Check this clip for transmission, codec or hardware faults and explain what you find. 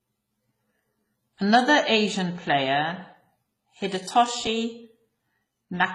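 There's one fault, and it runs the whole way through the speech: transcoding between lossy codecs. Nothing survives above about 14.3 kHz, and the sound fits a low-bitrate WMA pass likely followed by HE-AAC around 20 kbit/s. The second codec re-encodes the first one's artefacts, so both sets of damage stack up audibly.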